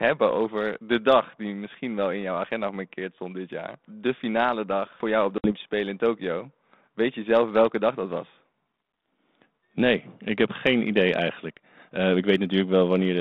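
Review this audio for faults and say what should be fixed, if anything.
Just after "voor jou op de", at 5.38 s, the speech cuts to a hard-edged hole of silence about 60 ms long, then returns distorted until about 5.52 s. This is packet loss on an ADPCM call. A few packets of the 32 kbit/s G.726 stream went missing and were replaced with silence, so the decoder's adaptive predictor and step size lost step with the sender's and had to re-converge. Forward error correction or redundant packets on the link, with loss concealment that extends the last audio instead of inserting silence, would prevent it.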